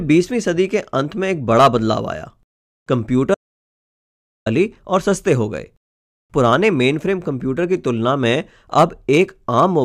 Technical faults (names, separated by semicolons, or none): audio dropout to silence